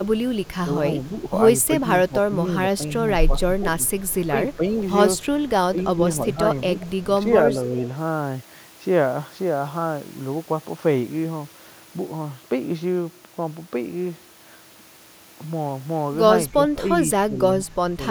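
From 0.64 to 4.75 s the speech dips in patches by about 10 dB. This is speech suppressed in double talk, likely an echo canceller turning both talkers down. On the waveform it shows as notched, shrunken stretches.

From 3.87 to 4.56 s an echo leak trails the speech by 274 ms, very faint, likely residual loudspeaker pickup. On a spectrogram it appears as a weak, delayed ghost of the speech harmonics.

Further suppression dips follow at 5.71 to 6.39 s. A second faint echo, slightly louder, appears at 6.8 to 7.03 s. A shallower dip of about 5 dB comes at 7.03 to 7.83 s. The deepest dip, around 15 dB, runs from 16.5 to 18.02 s.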